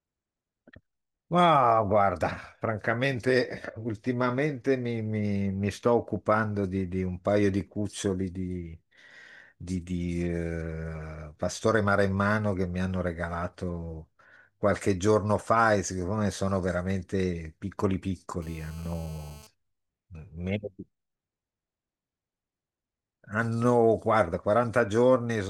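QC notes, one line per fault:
18.42–19.47 s GSM phone buzz: a hard, raspy buzz at about 217 Hz, around 26 dB below the speech, holding steady as during a call. A nearby 2G phone's radio bursts are rectified by the audio circuit. Unlike smooth mains hum, it carries dense harmonics.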